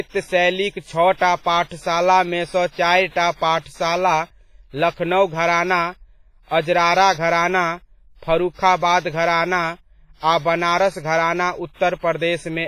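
Throughout the speech, a low-bitrate transform codec, likely WMA compression at around 24 kbps, has quantised heavily, smearing its noise over long blocks and zeroing weak components. The result is a ringing, washy sound with hiss that swells and fades with the speech, and nothing above 15.6 kHz.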